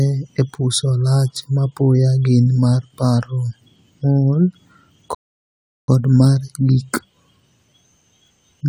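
A playback stall, most likely from the player running out of buffered data or its output thread being blocked, interrupts this speech clip at 5.15 s. The output drops to silence in mid-flow for about 0.73 s, an obvious gap rather than a natural pause, and the sound picks up again at 5.88 s with "mar gik". The speech stops abruptly and then restarts, which is the audible mark of the player starving and then recovering.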